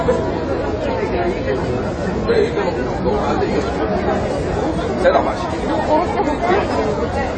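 AAC compression runs through the whole clip, and it is plainly audible. The sound is dull and smeared, with nothing above 9 kHz. A fizzy, warbling texture rides on sustained parts. That points to a low bitrate, likely around 24 kbps AAC-LC. Starved of bits, the encoder dropped the top band and coarsely quantised what remained.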